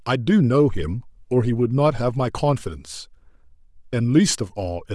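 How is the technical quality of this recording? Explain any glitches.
The recording is compromised by audible coding damage running through the whole speech clip. Throughout, the upper spectrum sounds breathy and grainy, with noise-like hiss; likely Bluetooth LC3 compression, whose coarse quantisation at a rate around 48 kbps replaces treble detail with synthetic noise.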